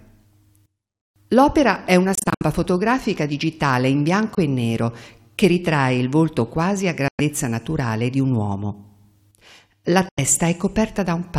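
The audio cuts to silence four times and resumes as if it had kept playing: 2.15 to 2.42 s (scattered gaps, the longest 64 ms), 4.35 to 4.39 s, 7.08 to 7.21 s and 10.09 to 10.19 s. This is likely Bluetooth dropout from late packets being discarded.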